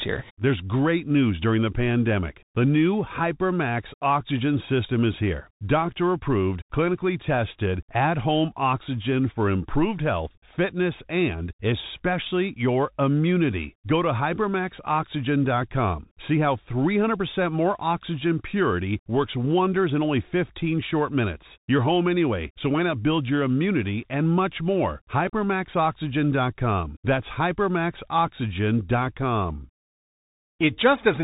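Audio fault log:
Throughout, Bluetooth CVSD headset codec: the speech is held to a narrow telephone band with a hard ceiling at 3.8 kHz. Each sample is coded as one up-or-down bit with an adapting step, which fits a 64 kbps stream. Loud high sounds outrun the step and distort, s sounds turn scratchy, and a granular hiss sits beneath. A spectrogram shows an empty band above 3.8 kHz over a speckled noise floor. The waveform shows slope-limited edges on loud onsets.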